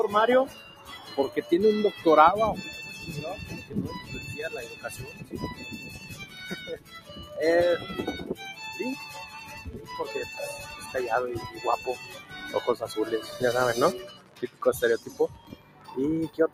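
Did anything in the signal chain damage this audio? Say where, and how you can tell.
Yes. The noise suppressor applied to music or sounds runs throughout. This speech-oriented call processing treats sustained content as noise, so the level swings by roughly 15 dB and the sound pumps.

The noise suppressor cuts sound at 0.48–1.16, 5.08–5.33, 5.78–6.36, 6.74–7.32, 14.08–14.62 and 15.31–15.95 s. At these points steady sound and decays drop by about 8 to 12 dB.

A train of clicks runs from 3.56 to 16.34 s. These are irregular ticks about 11 per second, roughly 10 dB above the sound. This likely comes from interference or a faulty connection or power supply in the analogue wiring.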